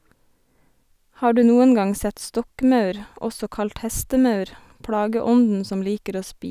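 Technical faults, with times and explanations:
No technical faults are present, so there are no times or explanations to give.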